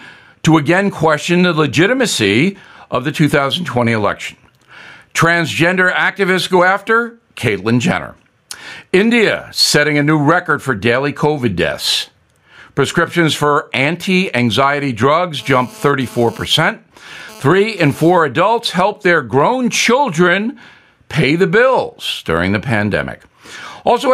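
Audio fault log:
Throughout: gain pumping. The gain swings by around 15 dB. Loud and soft passages sit too close in level. Likely excessive input gain with a fast limiter clamping down.
15.39–18.20 s: GSM phone buzz, after "for anti anxiety drugs" and ending before "adults help their grown". A harsh, raspy 217 Hz buzz, rich in harmonics, cuts in and out, about 32 dB below the speech. Bursty radio pulses from a phone transferring data are being rectified in the audio circuit.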